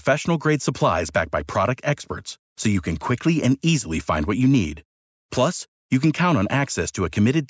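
No technical faults can be heard in this speech. It has passed through a call's microphone processing, which trims the lowest bass and leaves nothing above 8 kHz, as that path normally does.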